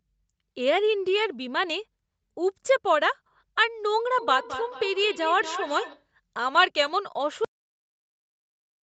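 From 4.19 s to 6.09 s there is feedback echo between two devices. A second device in the same room is on the call and plays this talker's audio back out, and the talker's microphone picks it up again. The local echo canceller only removes what its own loudspeaker plays, so it cannot remove this. Each syllable returns at an interval of around 200 ms. The loudest repeat sits about 10 dB below the direct speech and sounds thin and ringing, growing thinner with each pass round the loop; the call path itself is limited to 8 kHz.

At 7.45 s the clip has a cut-off end. The last stretch of audio was never written out, so the signal stops in the middle of a sound instead of decaying naturally. It drops straight to digital silence and stays there to the end of the file.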